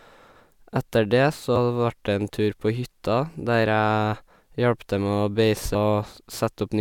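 A speech recording with two short bursts of damaged data in a compressed stream, at 1.56 s and 5.74 s. At each point, corrupted bytes cause the decoder to misread a frame and lose sync until it locks onto the next header, producing a brief glitch.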